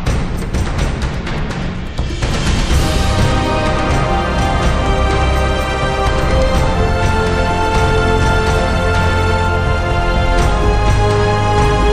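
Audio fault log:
Nothing stood out on listening to the clip.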